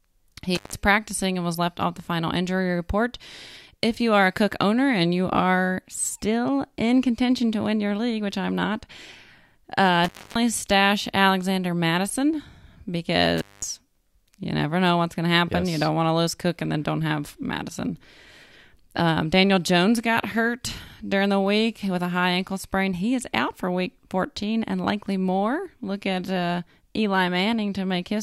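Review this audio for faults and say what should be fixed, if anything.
Intermittent contact occurs three times in this speech: 0.55 to 0.75 s, just before "practicing and was left", with a gap of about 158 ms; 10.04 to 10.36 s, open for about 272 ms; and 13.38 to 13.64 s, open for about 211 ms. Each time the signal drops out with crackle at the edges as a loose plug or cable conductor briefly separates, leaving faint hiss until contact returns. Reseat or replace the suspect cable and connector. To prevent it, use strain-relieved, well-seated connectors and check cables before recording.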